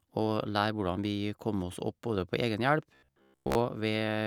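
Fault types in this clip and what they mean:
Robotic sound from repeated short buffers: new audio is likely reaching the playback software too seldom, so it fills the gaps by replaying the last short slice while the real signal is skipped. From 2.95 to 3.55 s most of the speech is replaced by these repeats, and their regular spacing imposes a fixed pitch of 66.8 Hz, which fits a slice of about 15 ms. The voice becomes a stiff metallic buzz that only loosely follows the speech.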